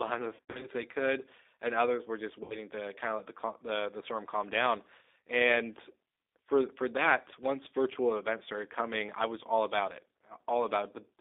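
Throughout, the speech is confined to roughly 300 Hz to 3.7 kHz and sounds rough and synthetic. This is G.729 codec damage at a rate that points to 8 kbit/s, and it is coarser than a plain telephone band-limit.

From 0.35 to 0.68 s, VoIP packet loss concealed by the speech codec leaves about 180 ms missing, scattered over 280 ms, with the longest gap 80 ms. A shorter loss of 60 ms follows at 2.44 to 2.58 s. In both places the decoder stretches the preceding sound into a fading tone or noise instead of silent gaps, and the speech stays weakened briefly afterwards.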